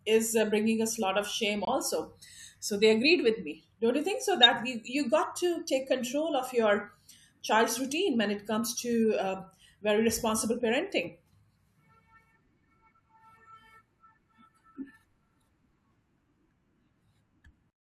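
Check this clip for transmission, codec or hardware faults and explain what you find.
Two codec faults stand out in this speech recording.

At 1.65 to 1.68 s there is a corrupt frame muted. Damaged frames were rejected and replaced with silence. That leaves an abrupt 32 ms gap, which fits a few lost frames.

At 4.43 to 4.46 s there is a corrupt frame decoded. About two damaged frames were played anyway, misplacing energy in frequency. The result is a 28 ms burst peaking near -10 dBFS.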